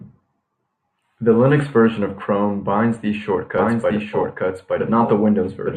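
Speech, and from 3.58 s to the end a full-level second copy enters abruptly about a second behind, a doubled audio track, likely from a slower capture path or misaligned edit.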